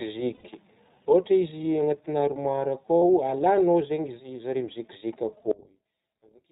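Throughout the clip the speech carries the signature of the iLBC codec. Nothing above 4 kHz survives, and the voice has a plainly audible rough, slightly synthetic edge from the coarse modelling of its excitation. The character fits iLBC running at about 15.2 kbps with 20 ms frames, each coded on its own without drawing on the previous one, so the damage is steady rather than building up over time.

From 0.34 to 0.45 s a gap of about 100 ms is filled with a held, faintly buzzy vowel-like tone. This is the sound of lost iLBC frames: the decoder repeats the last pitch cycle, mixes in noise and lets it fade. The length points to roughly five consecutive 20 ms frames going missing. Normal speech resumes almost immediately afterwards because the following frame decodes independently.

A second, shorter loss occurs at 2.99 to 3.03 s and lasts about 40 ms, consistent with two missing frames. The same concealment fills it with a brief breathy hold, and the voice is right again just after it.

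From 5.51 s to the end at 6.52 s the level drops by about 26 dB and the voice nearly disappears, leaving only a faint residue. The likely cause is one channel inverted: with one stereo channel in reversed polarity, the centred content cancels when the channels are summed to mono. Only the small difference between the two channels is left to hear.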